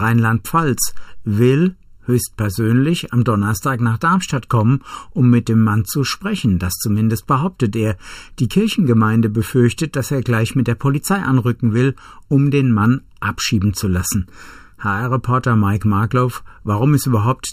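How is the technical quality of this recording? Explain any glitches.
The recording has one problem, and it runs the whole length of the speech: channel delay (comb filtering). One channel arrives a bit under a millisecond after the other, and when the two are folded to mono the shared content cancels at regularly spaced frequencies, with the first dip somewhere around 700 Hz and more notches further up. Those notches never move, so the speech sounds hollow and phasey from start to finish.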